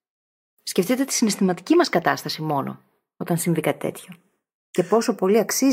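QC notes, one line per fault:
Throughout, channels drifting apart. The delay between left and right grows steadily, reaching a fraction of a millisecond. This points to two devices on separate clocks, differing by around 30 parts per million. In mono the comb notches sweep slowly, heard as slow flanging on the speech.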